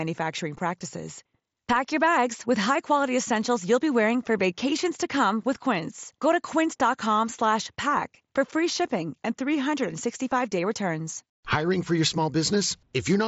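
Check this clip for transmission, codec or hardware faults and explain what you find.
Nothing stood out on listening to this speech, which comes through a Bluetooth mSBC headset link with its band ending at about 7.7 kHz, as that link normally gives.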